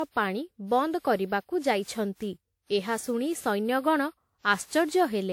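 Over the first 1.5 s there's sample clock jitter. The converter's timing wobbles by something like a microsecond or two, so samples land early or late. On steep, bright parts of the speech that shows up as a faint grainy hiss, roughly 45 dB below the signal, and it drops away in the pauses.

All the way through, the speech has a swirly, hollow, smeared quality, with blunted consonant attacks and nothing above 19.9 kHz. That's likely generation loss: the audio went through something like half a dozen or more lossy encode-decode passes. The sound points to WMA at around 96 kbit/s, with errors piling up on each shifted frame grid.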